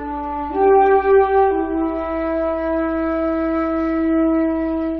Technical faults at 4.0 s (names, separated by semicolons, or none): none